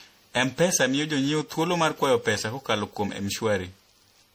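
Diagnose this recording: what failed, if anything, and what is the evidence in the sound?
The failure sits at the codec stage and runs through the whole speech clip. It sounds swirly, hollow and smeared, with softened consonant attacks, which most likely points to generation loss from roughly seven successive lossy passes, fitting a 64 kbit/s MP3 chain. Content extends to about 20.8 kHz, so a single low-bitrate encode with its usual lowpass can't explain the damage. Each re-encode quantised on a shifted frame grid, compounding noise and spectral holes.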